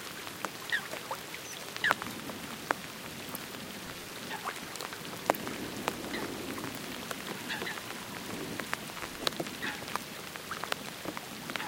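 At 3.86 to 4.13 s, and again at 8.95 to 9.24 s, the sound is overlaid with processor overload crackle: a gritty, tearing burst. The processor repeatedly missed its deadline for buffers of a few milliseconds, and each miss replayed a scrap of old audio with hard edges, dozens of times in each stretch. Unlike a single dropout or click, this is a dense run of tiny skips that stops abruptly when the load eases.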